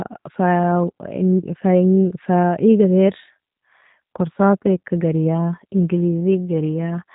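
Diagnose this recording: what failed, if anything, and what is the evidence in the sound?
G.729 codec damage throughout, at the codec stage: nothing above 3.8 kHz and a plainly rough, synthetic texture, which fits 8 kbit/s filter-and-pulse speech reconstruction.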